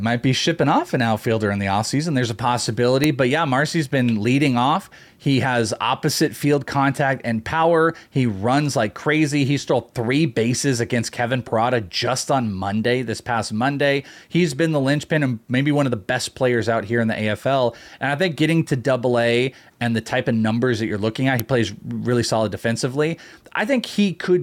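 Uninitialised buffer faults hit at 3.04 s and again at 21.40 s in this speech recording. Each time, a block of audio reached the output before any real samples had been written into it, so whatever stale data sat in that memory was played as sound. The result is an abrupt, loud crack. The first lasts about 0.67 ms, which fits a 32-sample block, and the second about 1.33 ms, consistent with a 64-sample block.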